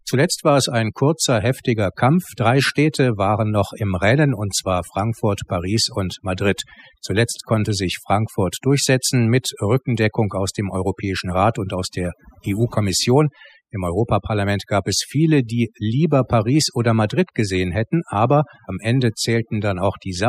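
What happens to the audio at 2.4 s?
At 2.4 s the speech carries overdone noise removal, which runs through the whole clip rather than starting there. A noise reduction stage set far too hard pulls individual frequency bands down whenever they sit near its noise estimate, taking quieter parts of the voice along with the noise. The background drops away and breaks up into twinkling specks. Unlike a noise gate, which shuts everything at once, this removal happens band by band.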